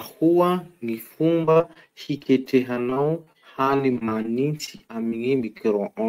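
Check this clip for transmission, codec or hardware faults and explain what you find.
There's one real problem: repeated packet loss (robotic sound) from about 1.41 s to 5.61 s. Around thirty short holes, none longer than about 44 ms, get patched by stretching the preceding sound, roughly 15% of that stretch, so the speech turns choppy with pieces missing.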